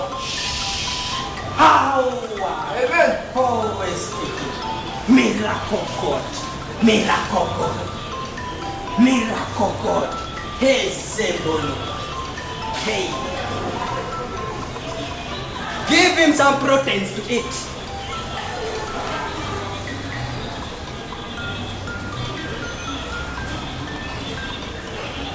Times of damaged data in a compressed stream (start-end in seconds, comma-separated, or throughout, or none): none